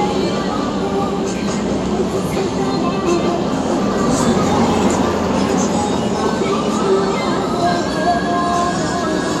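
No technical faults can be heard anywhere in this audio.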